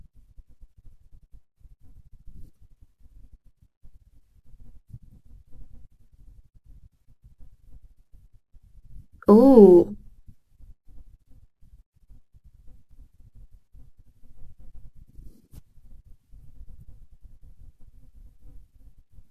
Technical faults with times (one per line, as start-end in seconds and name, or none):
1.00 damaged data in a compressed stream
4.79 damaged data in a compressed stream
10.17 damaged data in a compressed stream
12.91 damaged data in a compressed stream
15.70 damaged data in a compressed stream